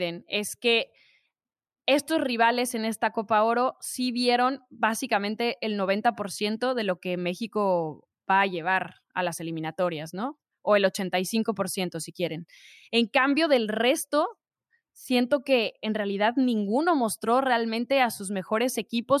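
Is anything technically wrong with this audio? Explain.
No, nothing in this speech recording stood out as a technical problem on listening.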